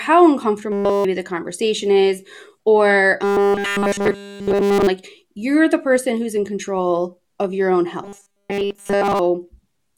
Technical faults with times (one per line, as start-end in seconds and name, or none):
0.72-1.04 robotic sound from repeated short buffers
3.24-4.87 robotic sound from repeated short buffers
8.04-9.19 robotic sound from repeated short buffers